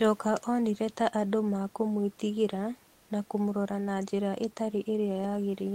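Comfort noise in place of the background runs from 2.93 to 3.09 s in this speech clip, a gap of about 160 ms between "onire ta andũ mekúmwĩtigĩra" and "na kũmũrora na njĩra". The room noise, sitting about 33 dB under the speech, gives way to a smoother noise of a different tone about 1 dB quieter, roughly 35 dB below the loudest parts. The likely cause is Opus discontinuous transmission: the sender paused during the silence and the receiver synthesised stand-in noise until the speech resumed.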